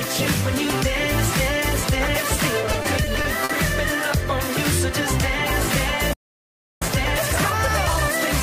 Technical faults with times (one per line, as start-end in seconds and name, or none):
2.23 block of digital silence
2.62-3.51 repeated stalls (stutter)
6.13-6.82 playback stall
6.82-8.43 time-compressed catch-up